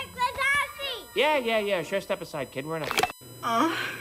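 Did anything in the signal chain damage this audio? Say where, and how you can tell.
Yes. USB whine in the analogue wiring: fixed 1 kHz and stronger 8 kHz tones run throughout, about 20 dB below the audio, from USB bus frame current leaking through power or ground.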